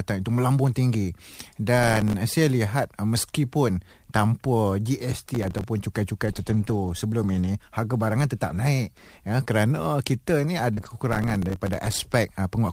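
Speech carrying three kinds of fault. Processor overload crackle hits at 1.84–2.14 s, 5.35–5.64 s and 11.13–12.03 s: a run of missed deadlines on buffers of roughly 3 ms each drops tiny slices to silence, giving gritty tearing. Scattered short gaps appear between 6.25 and 9.48 s: a few lost packets, each at most about 20 ms, are patched by continuing the previous sound, leaving brief ticks. Repeated packet loss gives a robotic sound at 10.74–10.95 s, where three gaps up to 30 ms long leave 40% of that stretch concealed, making it choppy.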